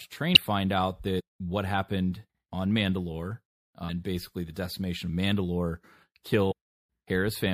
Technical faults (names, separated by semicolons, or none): damaged data in a compressed stream